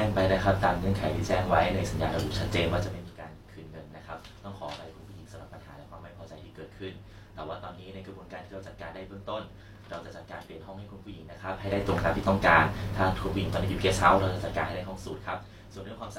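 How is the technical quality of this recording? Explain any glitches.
One glitch stands out: zipper noise from 2.76 to 3.16 s. A level drop of roughly 15 dB was applied in unsmoothed 2 dB steps, around thirty a second, so each jump clicks and the speech carries a brief zipping rattle.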